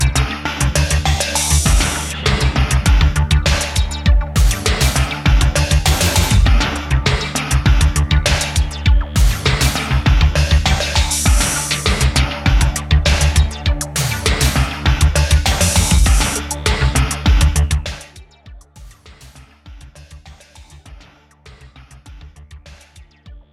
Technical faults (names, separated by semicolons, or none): none